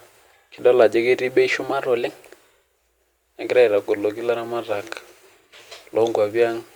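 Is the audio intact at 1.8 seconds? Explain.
No. Just after "ajo ketii bei", from 1.73 to 2.31 s, the speech suddenly runs about 6.3% fast and rises by 106 cents, slightly more than a semitone, then snaps back to normal speed and pitch. This is a drift correction step. The likely cause is clock-matching software that changed the playback rate in a single jump to refill or drain its buffer, so tempo and pitch moved together for this stretch.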